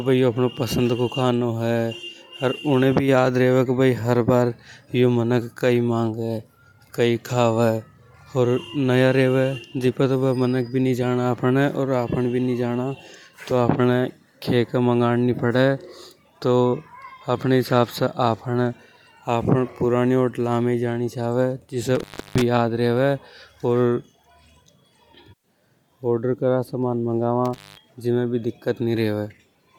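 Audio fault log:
Throughout: Bluetooth LC3 compression, likely the cause of the grainy, breathy edge on the speech. The damage is plainly audible: sibilants and upper harmonics sound smeared and noisy, as if parts of the top end were thrown away and patched with synthetic hiss. The texture fits a transform codec working in 10 ms frames at a modest rate, something like 48 kbps. The band still runs to about 20.2 kHz, so the roughness comes from coarse coding, not a low cutoff.
21.95–22.42 s and 27.45–27.84 s: intermittent contact, where the signal drops out as though a plug or cable briefly lost its connection. Each dropout opens with a crackle and closes with another. In between, the speech is gone and only faint hiss remains. The first gap lasts about 0.32 s. The second is shorter, about 0.18 s, and the speech comes back on "जीमे भी". The scratchy edges come from the contact chattering as it breaks and remakes.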